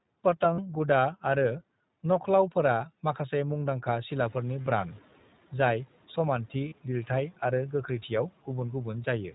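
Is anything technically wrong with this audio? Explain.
Yes. The speech has been through a low-bitrate voice codec, a few short stretches were lost in transit, and a noise suppressor briefly falls behind a jump in background noise.

Throughout the clip, the iLBC codec gives the speech a slightly rough, synthetic edge. Everything above 4 kHz is missing, so sibilants sound dull. The codec rebuilds each 20 ms frame's excitation on its own, and the coarse, buzzy texture fits its 15.2 kbps mode. Unlike a wideband codec under strain, the loss here is a hard narrowband ceiling plus a grainy texture, not smearing or warbling.

Lost iLBC frames appear at 0.54–0.60 s and 6.68–6.74 s, each about 40 ms and consistent with two missing frames. There are also single-frame losses at 4.63 s and at 8.66–8.69 s, just after "आरो गोख्रैथियाव". At each one, the decoder repeats the last pitch cycle with added noise, which sounds like a short held, faintly buzzy vowel. 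The speech snaps back immediately afterwards, because each frame stands alone. That quick recovery separates these losses from dropouts in codecs that drag damage into later frames.

The noise suppressor catching up is heard from 4.1 s to 5.07 s, just after "माखासे मुंदांखा". The room noise rises by about 13 dB at roughly 4 s. The suppressor's estimate of that noise lags behind, so at first the noise passes with little reduction. It then sinks by about 8 dB over roughly a second as the estimate adapts. This gradual fade after a step, rather than a level pumping with the speech, is what marks it as estimator lag and not compressor action.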